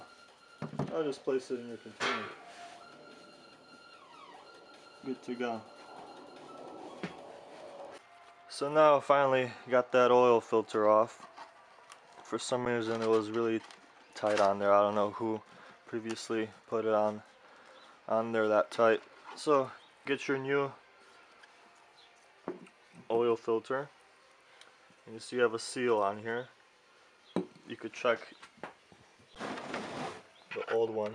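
An underrun with held sample occurs at 12.65 s and again at 29.35 s. Each time the output buffer ran dry, and the converter froze on its last value instead of dropping to zero, so the waveform flattens into a brief plateau of about 8 ms and then about 11 ms, the second fitting a 512-sample buffer. The sound stops with little click, and because playback picks up where it left off, each resumes softly.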